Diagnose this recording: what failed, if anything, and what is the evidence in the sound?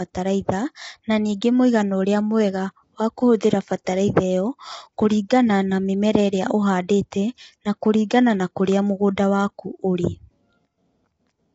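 The failure is at the codec stage, likely low-delay AAC compression such as AAC-ELD. Throughout, the speech sounds rough and grainy, with noise filling the gaps between harmonics. Nothing is heard above 7.7 kHz. The roughness fits a bitrate around 24 kbps.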